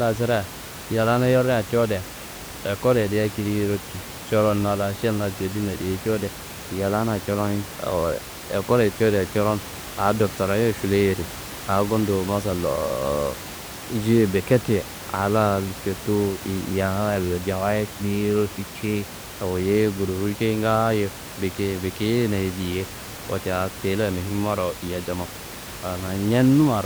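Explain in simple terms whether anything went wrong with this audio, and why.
Nothing went wrong with this speech recording. The only extra sound is some quiet background noise from the room, which comes from where the microphone was and sits well below the speech.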